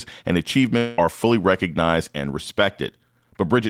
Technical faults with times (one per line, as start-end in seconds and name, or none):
0.77-0.99 long network dropout